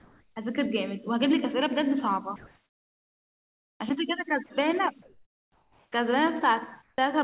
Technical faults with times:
0.00-0.36 comfort noise in place of the background
2.36-3.80 comfort noise in place of the background
4.46-4.50 sound dropped by the voice detector
5.02-5.92 comfort noise in place of the background
6.82-6.98 comfort noise in place of the background
6.96-6.98 onset clipped by the voice detector

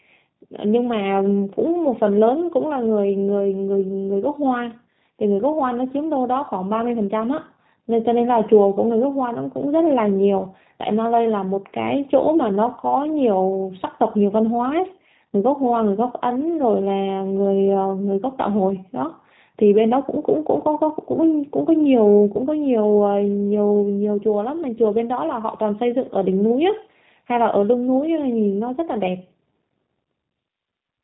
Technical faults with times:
0.00-31.03 G.729 codec

